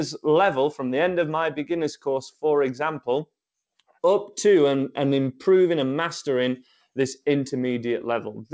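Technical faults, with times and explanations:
No technical faults are present; the band stops at about 8 kHz, as expected from the call path's G.722 codec.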